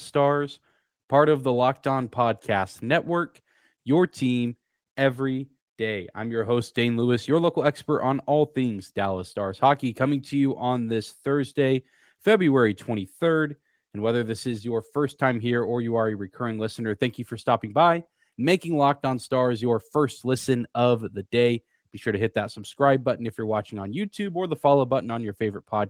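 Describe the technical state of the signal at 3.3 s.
At 3.3 s the speech is intact, with no fault in the signal, and the Opus voice compression running at 24 kbps in hybrid mode leaves only light coding traces.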